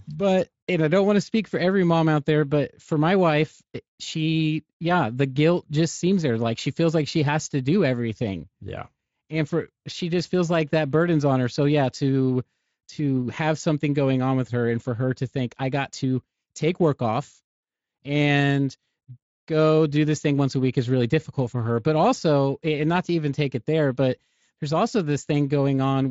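No faults are audible in the speech, with the Speex coding leaving only light coloration.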